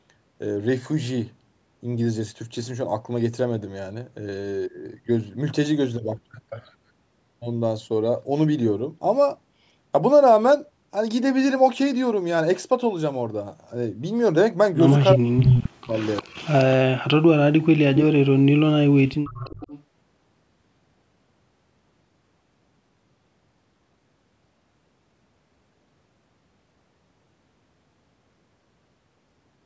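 Speech, in which an echo canceller likely could not tell the near talker from the loudspeaker echo while both sides spoke, so it pulled both down. This speech suppressed in double talk hits 15.14 to 15.93 s, gapping for under a second in total, and 16.87 to 18.07 s, for about a second. In both stretches the voice drops by up to about 40 dB. An echo canceller likely let part of the loudspeaker pickup through as echo leak, returning a copy of the voice 353 ms late. From 15.38 to 15.61 s that copy arrives at about the level of the speech itself. At 15.98 to 16.75 s and 19.26 to 19.83 s it sits about 20 dB lower, as a faint trailing double. The call's microphone processing leaves nothing above 8 kHz.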